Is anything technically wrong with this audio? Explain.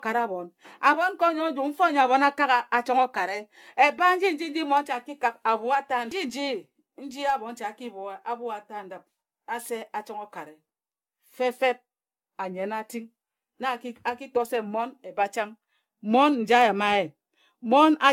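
Yes. Generation loss runs through the whole speech clip. It sounds swirly, hollow and smeared, with blurred consonant attacks. The likely cause is about ten successive lossy encodes, fitting AAC-LC near 96 kbit/s. Each pass requantises on a shifted frame grid, so noise and spectral holes accumulate.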